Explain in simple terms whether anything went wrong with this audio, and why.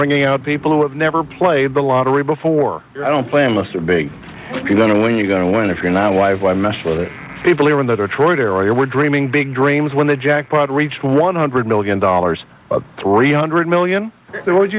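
Nothing went wrong with this recording. No faults can be heard in it.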